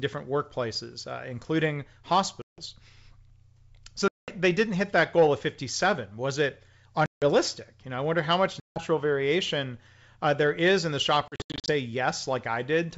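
A speech recording carried over wideband G.722 coding, with audible packet loss on an ADPCM call at five points: 2.42–2.61 s, 4.08–4.30 s, 7.06–7.24 s, 8.60–8.81 s, and 11.28–11.71 s. Each gap drops out abruptly into silence. After it, the decoder's adaptive predictor and step size no longer match the sender's, so speech resumes slightly distorted before resynchronising. The last event is scattered dropouts, none longer than 80 ms.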